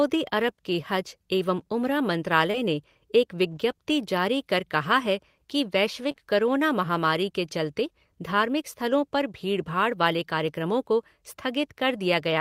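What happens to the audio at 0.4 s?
At 0.41 s, just before "के हज", a lost packet gets rebuilt from error correction: the decoder plays the next packet's low-bitrate copy, so there's no gap, just a briefly rougher, noisier 20 ms patch that fits a single lost packet.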